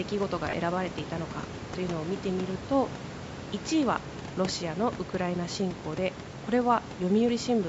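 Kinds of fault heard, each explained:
Lost LE Audio frames: The Bluetooth LE Audio link dropped data twice, at 0.50 s and 5.52 s. Each gap lasts about 30 ms, which fits three lost 10 ms LC3 frames. The decoder hides each gap by repeating the last good spectrum with random signs. The speech there turns briefly into a noisy, hissy smear instead of clear tone. The band-limited call sound and the quiet room noise run unchanged on either side of each gap.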